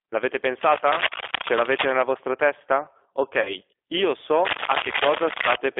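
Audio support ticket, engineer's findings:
G.729 codec, whole clip: speech at 8 kbit/s, rough and synthetic, band-limited to roughly 300 Hz to 3.6 kHz. Spectrogram shows empty space above 3.6 kHz and smeared harmonics.

Cable scratch noise, 0.61 to 2.02 s (about level with speech) and 4.45 to 5.56 s (louder than speech): dense, ragged rustling bursts. Likely a worn cable or connector with fluctuating contact resistance. Waveform shows irregular spiky fuzz; spectrogram shows broadband speckle.

VoIP packet loss concealed by the speech codec, 3.41 to 3.55 s: about 40 ms missing, which fits two lost packets. The decoder extrapolates into a fading buzz, and the voice stays weak afterwards. The spectrogram shows smeared, decaying harmonics.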